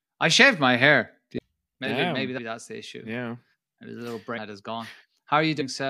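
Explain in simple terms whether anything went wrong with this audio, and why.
The speech jumps ahead at 1.37, 2.37, 4.37 and 5.6 s. That's compressed frames skipped: missing or damaged chunks get dropped, losing roughly 0.7, 0.4, 0.4 and 0.1 s.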